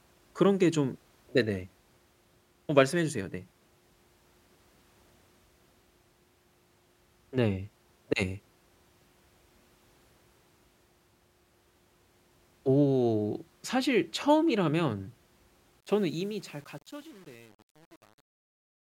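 From 15.80 s to the end at 18.83 s, the fade-out on the speech is processed at too short a word length with no dither, so the quietest stretches get rounded to a handful of coarse steps. That is truncation distortion on a fade, and its graininess fits an 8-bit stage. The fade itself starts at 15.80 s, and from 15.87 s onward the tail turns gritty as it nears silence.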